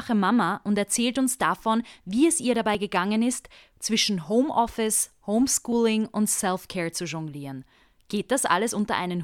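Audio missing between chunks occurs at 2.75 s and again at 5.72 s. The speech jumps forward abruptly at each point, with roughly 30 ms cut out and the two sides butted together without any gap. The spacing of about 3 s between the skips points to a likely cause: the recording was handled in fixed 3-second blocks, and a short stretch was dropped each time one block closed and the next began.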